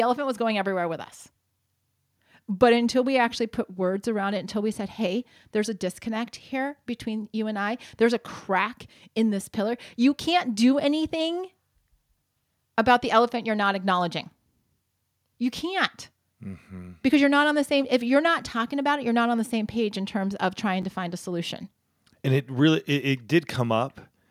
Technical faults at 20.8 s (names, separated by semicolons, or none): chunks out of order